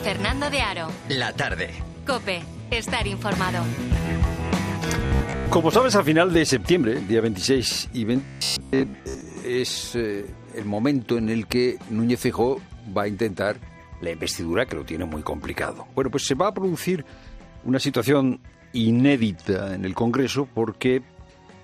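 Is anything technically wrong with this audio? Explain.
Yes. From 5.06 to 5.46 s and 8.25 to 9.21 s there is robotic sound from repeated short buffers, likely from audio arriving too slowly, so a roughly 15 ms chunk is replayed in place of most of the real material. That imposes a rigid, metallic buzz near 66.8 Hz.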